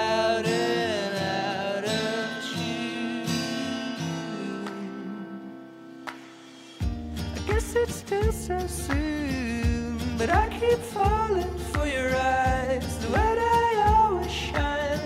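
No technical faults are audible.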